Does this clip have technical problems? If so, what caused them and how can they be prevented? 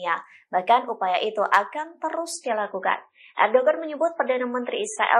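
Yes. From 2.33 s to the end, the adaptive stream drops to a lower bitrate. With no gap, treble vanishes above 10.5 kHz and coding artefacts rise. The sound fits a switch from about 128 to 24 kbit/s MP3 after the connection slowed. To prevent it, use a steadier connection, a larger playback buffer, or a higher minimum bitrate.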